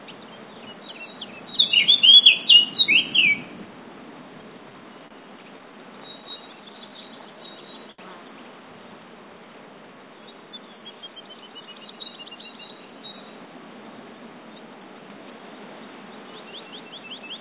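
From 4.7 to 6.68 s there are scattered short gaps: about seven tiny lost or late packets, each patched by carrying the last sound forward, so you hear brief ticks and smears, none much over 30 ms.

Overlapping that, from 5.77 to 7.63 s, a jitter buffer slow-down kicks in. The receiver repeats little slices to build a reserve, adding 94 ms, so things drag at 95% speed with the same pitch.

At 7.91 to 8.01 s a short stall from a late packet holds the sound for 71 ms while the buffer sits empty, so a sound is held too long before it picks up again.

Then from 11.07 to 12.32 s there's a jitter buffer speed-up. It trims roughly 150 ms of short pieces to shed excess delay, so the audio rushes along at 111% while keeping its pitch.

Throughout, the call path leaves nothing above 4 kHz, which fits a narrowband telephone codec.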